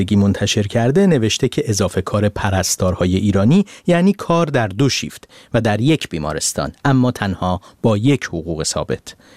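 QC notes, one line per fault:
5.82–7.68 s: drift correction step. For nearly two seconds the speech plays 5.45% fast and sits about 92 cents sharp, close to a semitone, then returns to normal speed and pitch. Speed and pitch move together because the same samples are being read out at a higher rate. The likely cause is a clock-matching stage raising its playback rate in a single jump to drain its buffer, then returning to the nominal rate.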